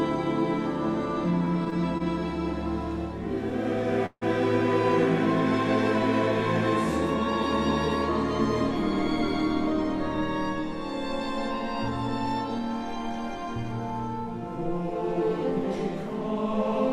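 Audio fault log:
1.45–2.02 s, repeated stalls (stutter): the playback catches four times in just over half a second, each hitch no longer than about 24 ms and together about 66 ms. The packets feeding it were arriving more slowly than they were being played, so the jitter buffer kept running dry and the receiver stretched the last sound over each hole. About 12 percent of the span is filled this way; nothing is lost, but the sound drags and judders.
4.06–4.23 s, call audio freeze: the sound hangs for about 154 ms, first as a continuation of what came just before, then fading into roughly 40 ms of silence, before resuming exactly where it stopped. This is likely packets held up in transit, emptying the jitter buffer so the receiver had to fill the wait. Nothing is missing; instead a pause has been inserted and everything after it plays about 154 ms late.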